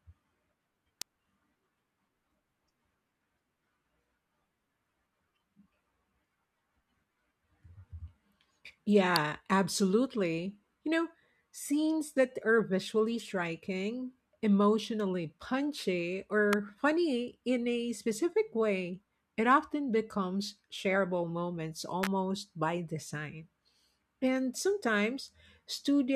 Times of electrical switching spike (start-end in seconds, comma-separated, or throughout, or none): 1.02, 9.16, 16.53, 22.03-22.07